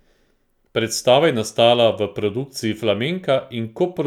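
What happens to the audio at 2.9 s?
Nothing goes wrong at 2.9 s; the speech runs through that moment intact, with no dropout, click or distortion.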